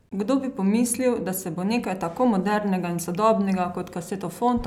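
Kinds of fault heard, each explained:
No technical fault can be heard anywhere in the signal.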